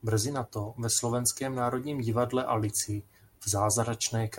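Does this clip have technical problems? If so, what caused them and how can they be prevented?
No, nothing technical goes wrong anywhere in this speech recording, so there's nothing here to prevent.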